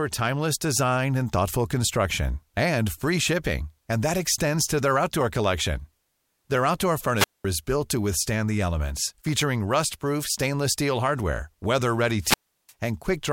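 Around 7.15 to 7.45 s and again at 12.19 to 12.73 s the speech hits a wireless microphone squelch dropout: the radio link fades, hiss swells briefly, then the receiver's squelch mutes everything, for about 0.21 s and then 0.35 s, before the voice returns.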